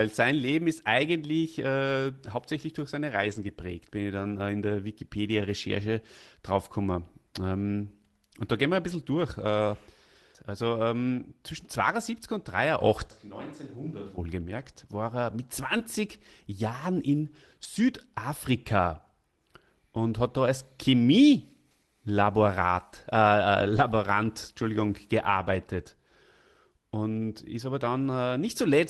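From 3.11 to 3.49 s, after "äh hauptsächlich durch seine", the audio turns rough and grainy before "bin ich". It is a lost packet rebuilt from error correction: the decoder played low-bitrate backup copies carried in the following packets. The same coarser texture returns from 4.19 to 4.29 s before "äh in der", from 23.59 to 23.81 s, and from 24.61 to 24.63 s.

From 13.11 to 14.18 s the sound abruptly turns hollow and roomy, drops about 10 dB, and gains background hiss, then snaps back. This is likely a switch to a distant microphone after the close one dropped out.

From 15.77 to 15.81 s, right after "war er mit", there is a brief smear. This short concealed packet loss happened when the decoder extended the previous sound to fill a gap of about 20 ms. At 15.79 s, rebuilt error-correction audio briefly adds some roughness.

Throughout, the Opus call path limits the audio to below 12 kHz.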